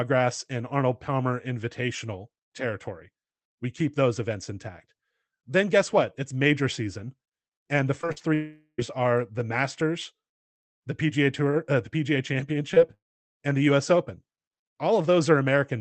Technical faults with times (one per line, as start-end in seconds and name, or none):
8.01-8.22 repeated packet loss (robotic sound)
8.34-8.80 long network dropout
12.74-12.78 short concealed packet loss
12.94-13.38 long network dropout